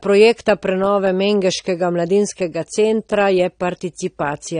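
From start to finish the speech is dull and band-limited, with nothing above about 9.7 kHz and a smeared, warbling edge on sibilants. That's likely AAC compression, AAC-LC at a low rate, which fits roughly 32 kbps starving the encoder of bits.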